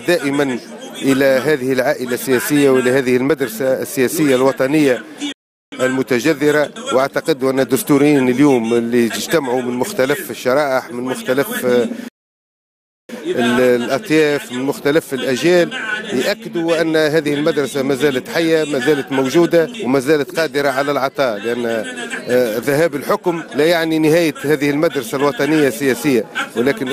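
At 5.32 s the audio falls silent for about 0.4 s, and at 12.08 s for about 1.0 s. These are playback stalls, likely from the player running out of data. Each is a clean hole of silence in mid-flow, far longer than a brief dropout click.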